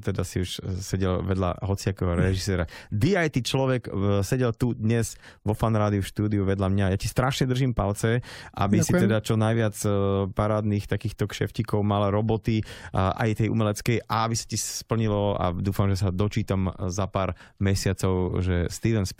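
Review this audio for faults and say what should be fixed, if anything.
Nothing needs fixing; no faults can be heard here.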